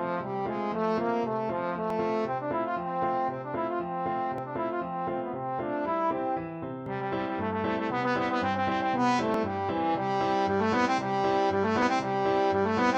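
Short skips at 1.90, 4.38, 6.86, 9.34 and 11.82 s, each about 20 ms, are likely audio missing between chunks, joined abruptly at roughly 2.5-second boundaries.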